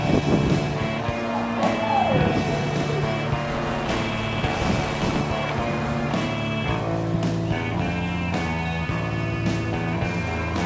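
From 3.48 to 5.2 s, buffer tearing: the ring buffer's writer and reader cross every period, splicing in slightly older audio and producing a steady 200 Hz robotic buzz.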